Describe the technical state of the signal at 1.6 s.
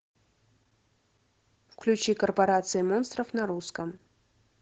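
At 1.6 s you're hearing Opus voice compression, and it's there for the whole clip. The speech has been squeezed through the SILK linear-prediction coder at wideband, so nothing above 8 kHz survives, and the excitation is coded coarsely. The damage is plainly audible: the speech sounds muffled, a bit hoarse and faintly robotic, which fits a low bitrate of around 12 kbps.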